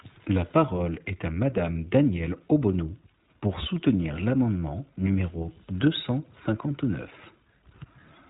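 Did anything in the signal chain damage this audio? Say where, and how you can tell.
Yes. iLBC codec damage runs through the whole clip. Nothing above about 3.8 kHz survives, and the speech is plainly rough and synthetic. Each 20 ms frame's excitation is coded independently, which fits iLBC's 15.2 kbps narrowband VoIP mode at the codec stage.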